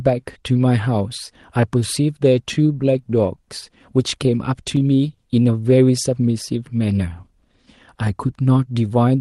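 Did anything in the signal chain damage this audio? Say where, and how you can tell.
Yes. The pacing wavers faintly throughout, a sign of clock drift between sender and receiver at the jitter buffer, with the sender's clock running roughly 3% slow.

From 0.21 to 9.0 s the speech drags slightly, near 98% speed. Repeated timing corrections stretch it, adding roughly 200 ms to keep pace.

Brief ticks at 0.85–1.84 s and 3.61–5.75 s are scattered short gaps: a few lost network packets, each about 10 ms or shorter, patched by extending sound.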